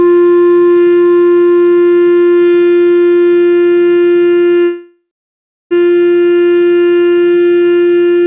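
At 4.64 s the sound stops advancing and its last moment carries on as a fading buzz or hiss, falling to silence for about 0.66 s before resuming at 5.73 s with nothing lost, now about 1.07 s late. This call audio freeze likely reflects delayed packets draining the jitter buffer, in a band-limited path with nothing above 4 kHz, consistent with G.711 A-law at 64 kbps.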